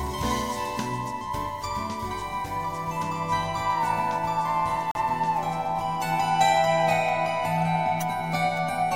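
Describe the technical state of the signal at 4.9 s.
At 4.9 s the signal shows damaged data in a compressed stream, spanning 4.91 to 4.95 s, roughly 40 ms. A short run of the encoded bytes there is corrupt, so the decoder misreads or rejects the affected frames, loses frame sync and scans forward for the next valid header before normal decoding resumes. The result is a brief, harsh digital blip or squawk cutting across the audio for that short span.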